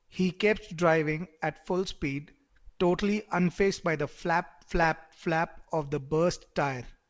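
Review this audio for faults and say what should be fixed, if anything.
Nothing here needs fixing: the speech comes over a G.722 call path with no content above 8 kHz, which is just how that codec sounds, and no faults turn up anywhere in the clip.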